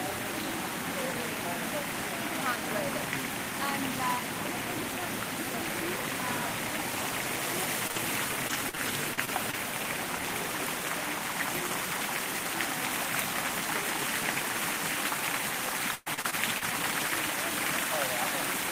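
At 7.23 and 7.35 s, two single 20 ms packets were lost but each was rebuilt from error correction carried in the following packet. There is no gap, just a brief rougher, grainier patch; on a spectrogram each appears as a thin column of slightly smeared, noisier texture rather than a hole.

At 7.87 to 7.91 s, a short concealed packet loss replaces 20 ms of audio with about 19 ms of the decoder continuing the preceding sound. It is heard as a quick smear or wobble, and shows as a narrow stretch where the spectral detail briefly freezes before blending back.

Immediately after, from 7.91 to 7.98 s, a burst of packet loss removes 40 ms. The decoder extends the last sound for about 45 ms and lets it fade, so a held buzz or hiss decays, and its last 20 ms near 7.96 s is rebuilt from error correction. The waveform shows a tapering envelope, and the spectrogram shows repeated, static bands where movement should be.

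From 8.48 to 9.55 s, repeated packet loss (robotic sound) produces six gaps totalling 160 ms, the longest 39 ms, covering about 14% of the span. Some of these gaps, roughly a tenth of a second, were rebuilt from error correction. The result is choppy, with a spectrogram broken by short, repeated smeared strips.

The second stretch of repeated packet loss, from 15.95 to 16.72 s, is heavier. Five gaps remove 220 ms, the longest 111 ms, and concealment fills about a third of the span, with very little rebuilt from error correction. It sounds choppy, with pieces missing, and the spectrogram shows wide frozen or fading blocks interrupting the audio.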